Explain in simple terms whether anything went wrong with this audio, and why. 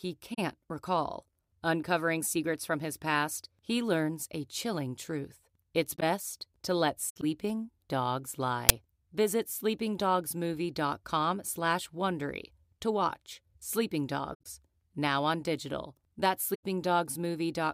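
Several things went wrong, all tied to how the speech was stored or played back.

The most frequent is corrupt frame concealed, heard at 0.33 to 0.39 s, 5.93 to 6.03 s, 7.09 to 7.24 s, 14.32 to 14.46 s and 16.54 to 16.64 s. Compressed audio is packed in short chunks called frames. Here some frames arrived damaged, and the player recognised this and patched over them. The longest gap, at 7.09 s, points to roughly eight damaged frames in a row. The shortest, at 0.33 s, fits about three.

At 8.23 to 8.26 s there is a corrupt frame decoded. This time the player did not notice the damage and played the garbled frame as if it were valid. The scrambled data put sound at the wrong pitches, which comes out as a faint chirp, squeak, blip or burst of noise lasting about one frame. It is quiet, but it sounds out of place.

At 8.69 s there is an uninitialised buffer. A 10 ms block of playback memory was sent to the speakers before any audio had been written into it. 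The leftover contents were played as sound, and the result is a sudden, harsh click or burst of digital noise.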